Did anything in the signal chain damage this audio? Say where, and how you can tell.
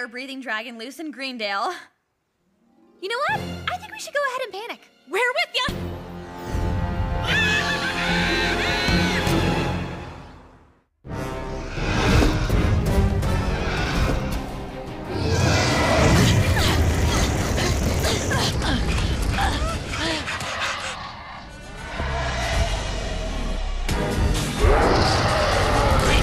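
Yes. From 18.51 s to the end, a section at the wrong speed: the audio slows to 0.775x and drops about four semitones, likely from a playback clock mismatch.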